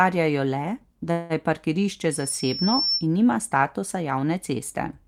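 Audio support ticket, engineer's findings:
Call audio freeze, 1.11–1.33 s: likely late packets draining the jitter buffer. Receiver stretches the last sound into a fading buzz or hiss for about 183 ms. Playback resumes where it stopped, so a gap is inserted, nothing lost, and everything after runs later.

Loudspeaker feedback squeal, 2.11–3.07 s: mic picking up its own loudspeaker, loop gain above one at 5.4 kHz. Single tone swells over roughly 0.7 s to about the level of the speech, then holds as a squeal until 3.07 s.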